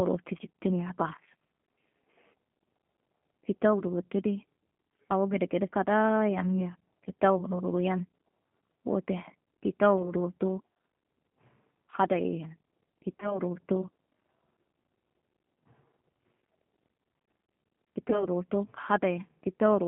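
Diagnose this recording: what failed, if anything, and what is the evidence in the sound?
G.729 codec, throughout the clip, at the codec stage. The speech is confined to a telephone band of roughly 150 Hz to 3.4 kHz, with nothing above it, and it has a plainly audible rough, synthetic edge. That roughness fits G.729A at 8 kbit/s. The decoder does not send the waveform itself. It rebuilds each 10 ms frame from a vocal-tract filter, a pitch predictor and a few sparse pulses, and fine detail between those pulses is lost.

VoIP packet loss concealed by the speech codec, at the network and codec stage, at 10.02–10.14 s, 13.20–13.41 s and 18.10–18.26 s. At each point the speech smears into a fading buzzy or noisy stretch and then recovers slowly. The first event fits a single lost 10 ms frame and the other two fit 20 ms losses. The decoder fills the gap by extrapolating its last pitch and filter at falling gain. 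Because every frame depends on the one before, the disturbance lasts well past the gap itself.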